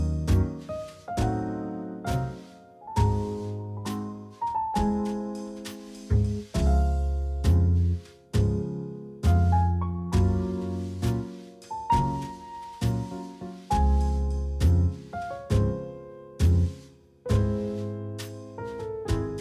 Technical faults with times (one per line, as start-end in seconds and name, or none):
none